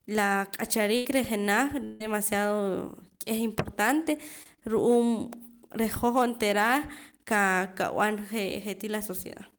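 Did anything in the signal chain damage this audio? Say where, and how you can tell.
Yes. The network stage caused a burst of packet loss from 0.96 to 1.06 s. About 90 ms of audio never arrived in time. The receiver covered the hole by extending the last sound for about 83 ms and turning it down as it went. You hear that stretch as a held buzz or a fading hiss. Then the sound jumps ahead. The material that belonged in the gap is simply gone.

A second, longer hole sits between 1.85 and 2.01 s. About 150 ms is missing, and the fill runs for about 153 ms. It never drops to silence. The concealment carries the whole gap as a decaying continuation before the real audio resumes further on. The length points to a long network dropout as the likely cause, rather than a few scattered packets.

There are two brief short concealed packet losses, at 4.43 to 4.46 s and at 5.95 s. The second comes just before "hoj onteera". 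About 20 ms and about 10 ms are missing. The decoder patched each hole by carrying the previous sound forward, for about 23 ms and 5 ms, and then blended back into the real stream. Each one sounds like a tiny smear or wobble, not a gap.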